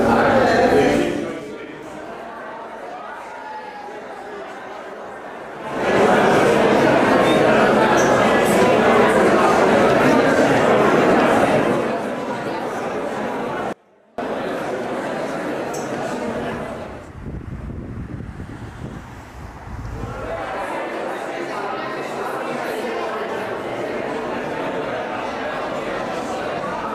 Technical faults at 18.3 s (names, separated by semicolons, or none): none